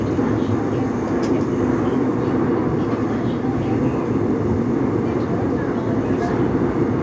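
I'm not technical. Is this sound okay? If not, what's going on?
Yes, the sound is fine: it went through an ordinary call connection whose codec passes nothing above 8 kHz, so the very top end is absent as it is on any such call, and nothing goes wrong.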